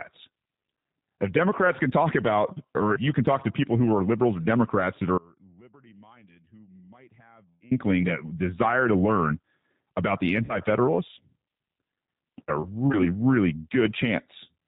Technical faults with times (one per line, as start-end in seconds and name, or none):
0.00-14.67 G.729 codec
5.18-7.71 audio dropout to a faint residue
10.45-10.59 VoIP packet loss concealed by the speech codec